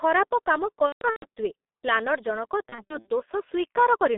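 Throughout, the G.723.1 codec muffles the speech into a 200 Hz to 3.7 kHz band. The heavy hoarseness and smeared consonants fit a bitrate near 6.3 kbit/s. From 0.87 to 1.25 s, just after "ଖରାପ କାମ", VoIP packet loss concealed by the speech codec turns speech buzzy and fading. About 270 ms goes missing, the longest gap 150 ms. From 2.69 to 3.10 s it recurs, with shorter gaps up to 60 ms.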